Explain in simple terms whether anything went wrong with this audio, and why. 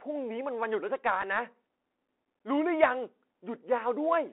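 Two things went wrong here, one lasting the whole clip and one brief.

The whole recording went through the Bluetooth CVSD headset codec, the basic phone-call format some wireless headsets use. It squeezes the sound into a narrow band, roughly 250 Hz up to 3.4 kHz, so everything sounds thin and boxy. The codec only nudges the signal up or down a step at a time, so the damage is plainly audible: s sounds come out scratchy, louder bright moments crunch, and a grainy hiss sits underneath.

At about 1.22 s there's a Bluetooth headset packet repeated. One small chunk of audio, around 3.8 ms, got lost between the headset and the phone, and the headset filled the gap by playing the previous chunk again. Because it was just one packet, you only get a tiny tick there rather than a buzz.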